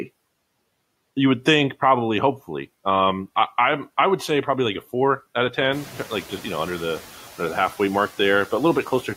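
A speech clip where the room noise jumps about 15 dB around 5.5 s and the noise suppressor is caught catching up: after "a four out of", from 5.72 to 6.17 s, the louder noise slips through lightly reduced, then sinks by about 4 dB over 450 ms as its noise estimate adapts, settled by "just you know under".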